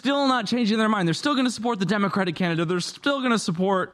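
A short recording of speech, with no technical fault to point to anywhere in it. Nothing in the sound calls for a time, a value or a cause.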